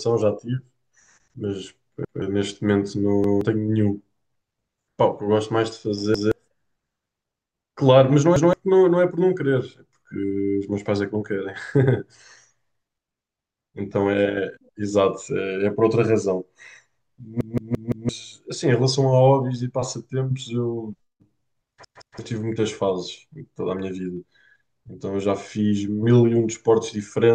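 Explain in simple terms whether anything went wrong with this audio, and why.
Repeated buffer faults cause short stutters at 2.05, 3.24, 6.14, 8.36, 17.41 and 21.85 s. New audio arrived late, so the player replayed its last 0.17 s chunk, which fits an 8192-sample buffer. At 17.41 s it repeats four extra times, losing about 0.7 s of speech.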